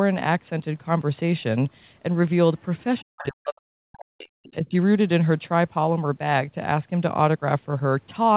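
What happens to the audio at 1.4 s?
At 1.4 s the speech is intact, with no dropout, click or distortion, only the narrow telephone-band sound of the call path, which carries nothing above about 4 kHz.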